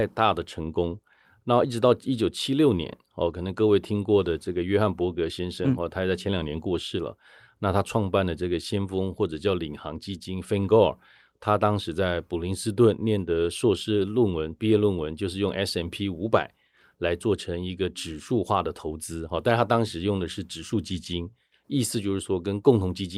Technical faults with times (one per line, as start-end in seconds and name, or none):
none